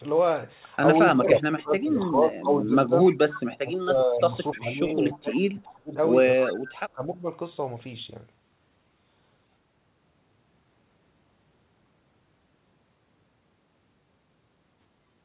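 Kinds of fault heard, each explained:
Speech suppressed in double talk: When both ends talked at once, the echo canceller most likely could not tell its own talker from the loudspeaker echo, so it turned everything down together. The voice sinks by about 20 dB from 1.12 to 2.93 s and from 6.47 to 7.32 s. From 3.47 to 5.96 s it drops as far as about 30 dB.
Echo leak: At the far end, the echo canceller likely let part of the loudspeaker sound picked up by its microphone pass through and return down the line. The result is a faint, delayed copy of the voice trailing about 296 ms behind the original. It appears in short scraps starting at 3.06, 4.51, 5.12, 5.65 and 6.42 s, about 15 to 25 dB below the main speech, and within the call's narrowband sound that stops at 4 kHz.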